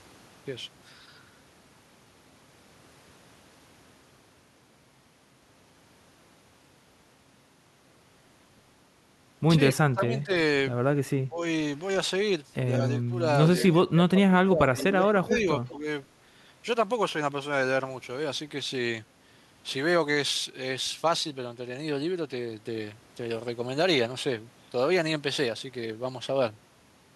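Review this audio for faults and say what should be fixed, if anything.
Speech suppressed in double talk: the voice dips at 9.67–10.32 s (by about 30 dB), 11.28–11.42 s (about 15 dB), 13.72–15.43 s (about 20 dB) and 15.74–15.85 s (about 5 dB), likely because the echo canceller could not separate near speech from loudspeaker echo and attenuated both. To prevent this, use an echo canceller with reliable double-talk detection that holds its adaptation and limits suppression while both sides speak.

Echo leak: brief delayed copies of the voice appear at 12.93–13.02 s and 15.67–15.72 s, roughly 25 to 30 dB below the speech, likely residual loudspeaker pickup that the far end's canceller failed to remove. They are told apart from room reverberation by a fixed delay of about 185 ms, which gives a distinct repeat rather than a smooth decay. To prevent this, lower the loudspeaker level or improve the acoustic isolation, and make sure the canceller's tail length covers that delay.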